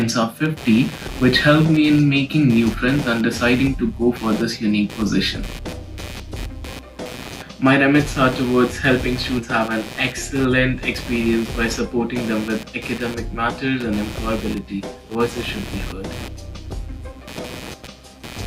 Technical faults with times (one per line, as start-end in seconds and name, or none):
0.00-18.46 computer activity noise
1.07-1.10 compressed frames skipped
9.37-9.42 compressed frames skipped
15.09-15.16 compressed frames skipped